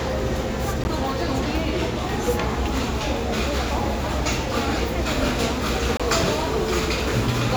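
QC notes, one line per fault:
0.81–0.89 s: corrupt frame decoded. A short burst of chirpy noise cuts across the sound for roughly 80 ms. Damaged bits in a few consecutive compressed frames were decoded as if valid, so misread gains and codes placed energy at unrelated frequencies. The error peaks at about -15 dBFS.
5.97–6.01 s: corrupt frame decoded. A briefer squeak-like blip of about 40 ms spans a couple of frames. It is louder, peaking at about -10 dBFS, from the same mechanism.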